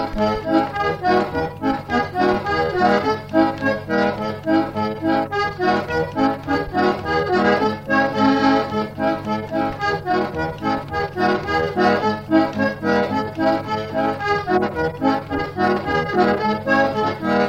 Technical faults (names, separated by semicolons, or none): corrupt frame decoded